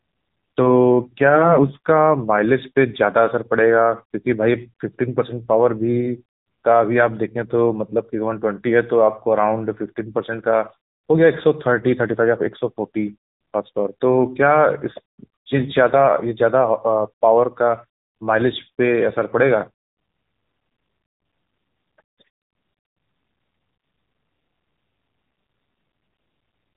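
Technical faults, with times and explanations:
Throughout, AMR narrowband mobile codec: the speech is rebuilt from a vocal-tract model driven by sparse pulses, giving a plainly buzzy, synthetic tone that fits a low AMR-NB mode near 7.95 kbps; a spectrogram shows energy cut flat at 3.8 kHz, empty above.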